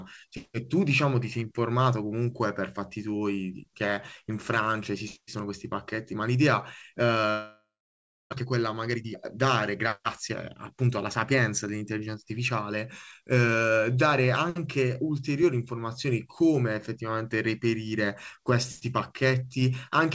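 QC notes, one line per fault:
7.30–8.34 s, long network dropout: the sound smears into a fading buzz, then about 0.66 s of near-silence, with roughly 0.6 s of material never returning. A likely packet loss. The waveform collapses to a flat line, and the spectrogram shows decaying smeared bands, then emptiness.
8.40–9.47 s and 10.76–11.81 s, jitter buffer speed-up: the first stretch plays 28% fast, trimming around 0.3 s, and the second 6% fast, trimming about 70 ms. Playback hurries at unchanged pitch. The waveform shows small splices between pitch periods, and spectrogram harmonics stay level while syllables compress.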